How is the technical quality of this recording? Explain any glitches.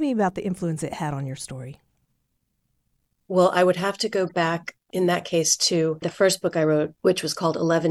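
The technical quality is marred by one brief glitch: a short chirp-like blip in the speech, from 4.28 to 4.31 s, right after "would have to go". It's quiet, peaking at about -35 dBFS. It's a corrupt frame decoded. Bits inside a compressed frame were damaged, yet the decoder played it anyway, misreading gains and codes. For roughly a couple of frames, energy lands at wrong frequencies, producing that fleeting squeak.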